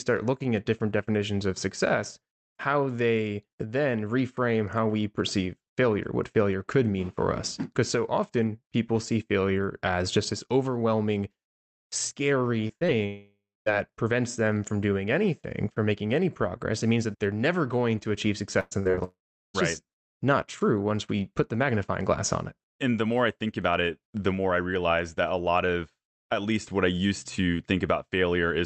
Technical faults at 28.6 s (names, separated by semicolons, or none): none